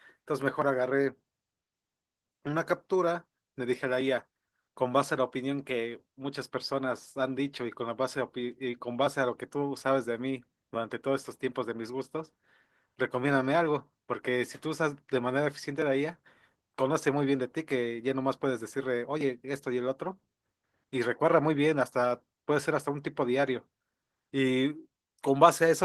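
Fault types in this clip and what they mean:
There are no fault types in this clip.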